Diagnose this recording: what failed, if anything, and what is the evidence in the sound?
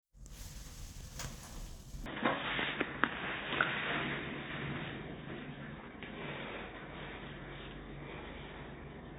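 At 2.06 s the sound abruptly goes dull and boxy and stays that way to the end, with nothing above 3.8 kHz. There's no gap at the changeover and the level holds steady, but fresh background noise comes in, sitting roughly 45 dB under the signal. That's likely an input switched to a poorer device at the driver stage, a narrower-band mic or a headset's call profile, bringing its own bandwidth limit and noise floor.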